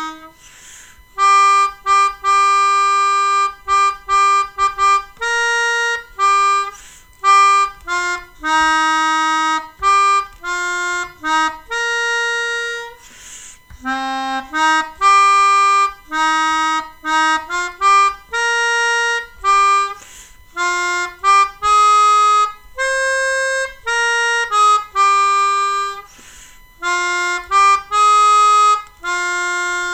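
A USB whine runs through the whole clip: a fixed-pitch tone at 1 kHz, strongest at its 2 kHz harmonic, sitting roughly 35 dB below the sound. USB bus power drawn in 1 ms frames leaks into the audio through the power or ground. Unlike mains hum's 50 or 60 Hz buzz, this is a thin, high whistle.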